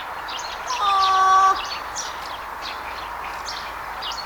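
No technical faults can be heard anywhere in this audio. There is nothing to flag at any point in the clip.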